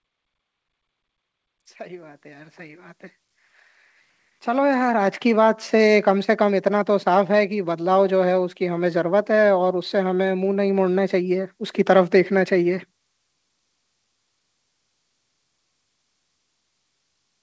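Automatic gain rising appears twice. From 1.77 s to 3.04 s the level climbs by about 6 dB, then from 4.25 s to 6.11 s by about 7 dB. In each case the gain control judged the incoming speech too quiet and ramped its gain up over a second or more, so the voice and the background noise swell together. Throughout, nothing sits above 8 kHz, consistent with a wideband call codec such as G.722.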